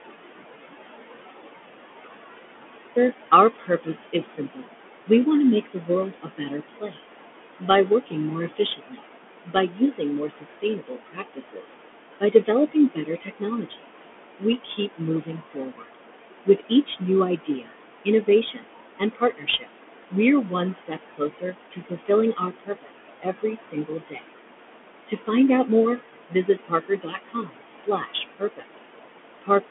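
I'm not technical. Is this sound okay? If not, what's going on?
No. The recording opens with an audio dropout to silence: total silence, with no room sound at all, until about 2.96 s, most likely from a lost connection or a muted input.

The whole clip goes through a Bluetooth CVSD headset codec, so nothing above about 3.6 kHz gets through. That makes speech sound muffled and phone-like, with scratchy s sounds and a grainy hiss underneath.

Noise suppressor artifacts are also present throughout. The suppressor pushes the background room noise well down between phrases, then lets it come back under speech, so the background seems to pump.

The same suppressor also causes speech cut by the noise suppressor. Between 3.59 and 20.13 s, about five seconds in total are affected, with soft sounds and word endings swallowed. Briefer cuts follow at 20.86 to 24.31 s, 25.07 to 25.69 s, and 26.29 to 28.8 s.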